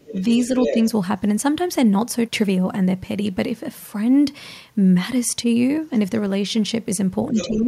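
Right from the start, 0.0 to 0.75 s, there's the other side's voice leaking through: a second voice sitting only a little below the talker, about 5 dB down. It's most likely loudspeaker playback reaching the mic that the echo canceller didn't fully remove, so the far end bleeds straight into this side of the call.

Near the very end, from 7.31 s to the close, you get speech suppressed in double talk. The talker's level sags by something like 15 dB at its worst, in pieces adding up to about a fifth of a second. The likely reason is that both sides spoke at once and the canceller, unable to tell the local voice from the echo, turned everything down. Overlapping that, 7.34 to 7.57 s, the far side leaks through again, this time fainter at about 10 dB under the speech, again probably residual echo.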